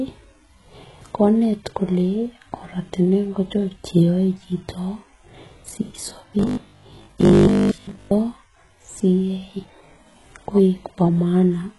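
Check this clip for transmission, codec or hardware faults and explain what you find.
Two faults are audible: codec damage throughout, and a robotic stretch in the middle.

Throughout, the speech likely went through HE-AAC compression at a very low bitrate, around 12 kbps. Treble is rebuilt from copied lower bands, so s sounds turn gritty and metallic, with nothing above 11.4 kHz.

From 6.39 to 8.13 s, the robotic sound from repeated short buffers likely comes from a 20 ms buffer being replayed over most of the audio, imposing a rigid 50 Hz buzz on the speech.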